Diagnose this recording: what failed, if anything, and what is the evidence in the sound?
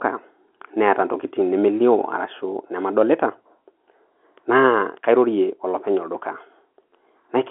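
Nothing failed: the speech sits in the usual line band of 250 Hz to 3.4 kHz with nothing above 3.8 kHz, which is the G.711 telephone coding path at 64 kbps doing what it should.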